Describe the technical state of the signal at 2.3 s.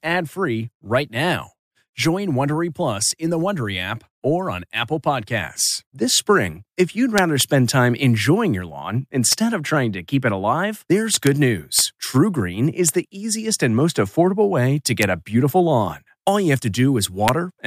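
The audio at 2.3 s is intact, with no fault in the signal at that moment.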